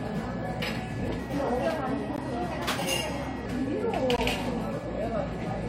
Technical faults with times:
1.19-3.46 section at the wrong speed
2.16 gap between stream segments
4.16 gap between stream segments

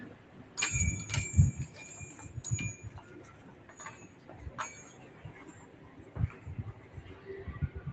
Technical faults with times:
0.00-7.93 noise suppressor applied to music or sounds
0.14-0.57 sound cut by the noise suppressor
3.33-3.73 sound cut by the noise suppressor
4.08-4.28 sound cut by the noise suppressor
5.70-6.00 sound cut by the noise suppressor

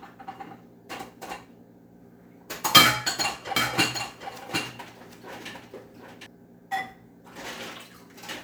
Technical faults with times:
3.56-6.26 doubled audio track

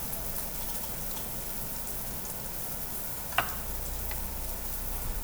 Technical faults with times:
none

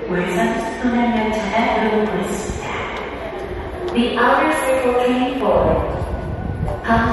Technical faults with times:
0.00-7.12 MP3 compression

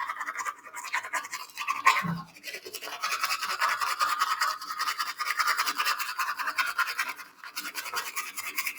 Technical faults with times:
0.00-8.79 noise suppressor applied to music or sounds
0.53-0.80 sound cut by the noise suppressor
1.34-1.57 sound cut by the noise suppressor
2.25-2.46 sound cut by the noise suppressor
7.11-7.91 sound cut by the noise suppressor

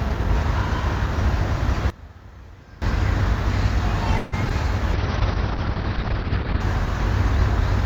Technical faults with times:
1.90-2.82 one channel inverted
4.17-4.34 call audio freeze
4.44-4.52 short concealed packet loss
4.94-6.67 call bitrate drop

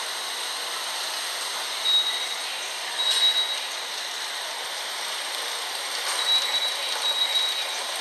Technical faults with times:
0.00-8.00 MP2 compression

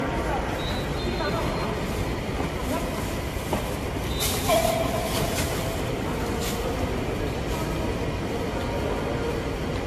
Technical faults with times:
0.00-9.87 generation loss

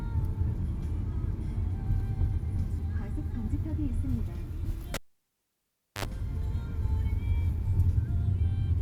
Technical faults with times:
4.94-6.05 cable pulled and plugged in

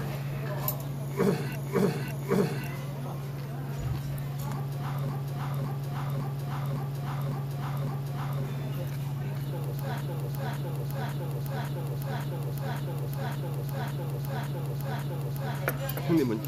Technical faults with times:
1.56-2.67 repeated frames
5.09-8.43 repeated frames
10.01-15.58 repeated frames

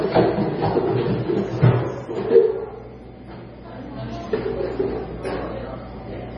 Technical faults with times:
0.00-6.38 MP3 compression

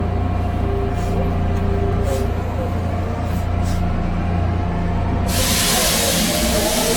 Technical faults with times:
0.00-6.96 generation loss
1.93 dropped buffer (overrun)
5.92 dropped buffer (overrun)

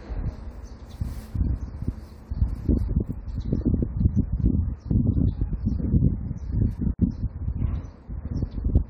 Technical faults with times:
6.94-6.99 gap at a join of encoded pieces

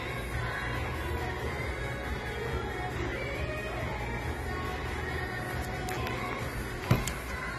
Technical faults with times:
0.00-7.59 AAC compression

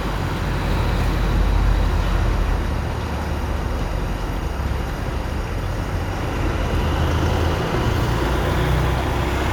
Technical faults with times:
0.00-9.52 timecode bleed

